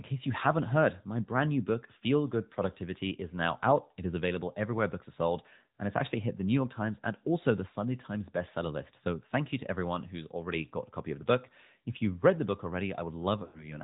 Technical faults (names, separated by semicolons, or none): AMR narrowband mobile codec; lost AMR speech frames